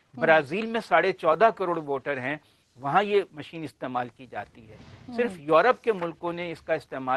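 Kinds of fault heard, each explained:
Clock drift between sender and receiver: the sending device's audio clock runs slow, by roughly one and a half percent, so the receiver's jitter buffer keeps draining. To cover the shortfall it must repeat small pieces, and brief timing hiccups recur unevenly across the clip.
Repeated timing corrections: from about 0.08 s to 6.9 s the receiver keeps inserting short repeated slices to stay in step with the slower sender. This adds around a tenth of a second and plays the sound at 99% speed, heard as slight stumbles and an unsteady tempo.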